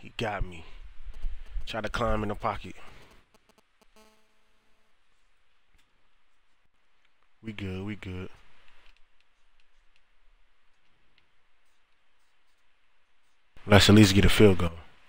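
From 1.14 to 3.97 s a galloping dit-dit-dit of brief buzzes sits well below the sound. These are GSM signalling bursts: a nearby 2G phone's radio pulses, rectified by the audio circuit, at about 217 Hz.

From 3.97 to 4.91 s they merge into a steady, hard, raspy 217 Hz buzz, about 32 dB down. This is GSM phone buzz, from the phone's call-mode transmission in bursts 217 times a second.

At 6.66 s and again at 13.57 s, sound and noise floor lurch together, down about 9 dB and then up about 14 dB. These are sudden gain jumps, likely digital gain applied without a ramp.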